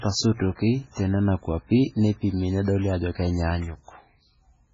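Speech, run throughout with heavy damage that is likely from MP3 compression at a very low bitrate, one that fits about 16 kbps. Starved of bits, the encoder cuts everything above 7.5 kHz and drops weak frequency lines frame by frame, so the sound turns dull, watery and swirly, with smeared attacks.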